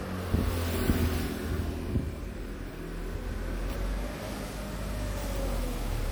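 Across the whole recording of sounds, the audio has a swirly, watery texture with hollow gaps in the spectrum, and sharp onsets arrive smeared rather than crisp. This is generation loss, likely from the material being decoded and re-encoded around five times with MP3, at a quality that fits 96 kbit/s. Each pass requantised the signal on a shifted frame grid, so the artefacts stacked up well beyond what a single encode at that rate would leave.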